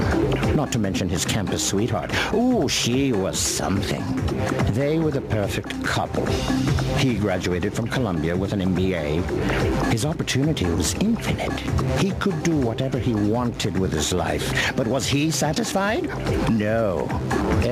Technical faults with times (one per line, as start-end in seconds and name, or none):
0.00-17.72 gain pumping